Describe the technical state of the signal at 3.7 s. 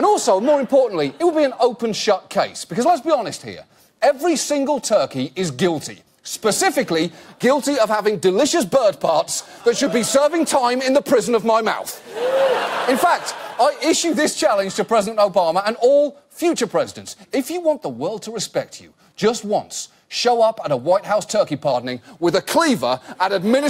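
At 3.7 s the signal is intact, with no audible technical fault at that moment.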